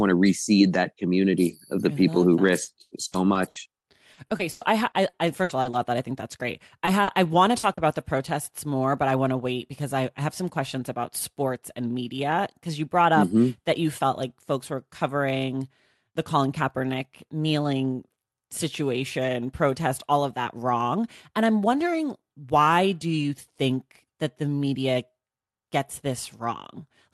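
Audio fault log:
2.45–5.83 s, repeated packet loss (robotic sound): after "I people who that", packets kept dropping, and each hole of up to 100 ms, about 0.7 s in all, was filled by extending the last sound. The speech turns choppy and robotic before "that I think that's".
6.85–8.01 s, repeated packet loss (robotic sound): after "I think that's great", a few shorter losses of up to 40 ms were patched the same way. The speech briefly turns choppy before "protests more but I".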